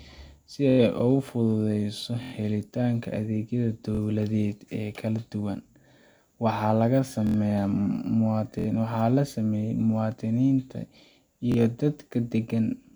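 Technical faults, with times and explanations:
0.70 s, 2.23 s, 3.95 s, 7.27 s, 8.59 s and 11.52 s, repeated buffer: the playback device ran out of fresh audio and played its last buffer again. Each stall lasts about 0.05 to 0.09 s, made of repeats roughly 23 ms long, which fits a 1024-sample buffer. The same tiny slice of speech plays back to back with a hard seam at each repeat, producing a brief stutter just before "helitaanka adeegyada" and just after "fududeyso helitaanka adeegyada".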